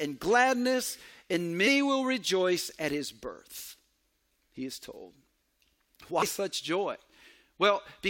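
Compressed frames skipped at 1.66 s, between "gladness and" and "will rejoice at his", and again at 6.21 s. Each time about four 23.2 ms frames never reach the decoder's output, so the speech jumps ahead by roughly a tenth of a second.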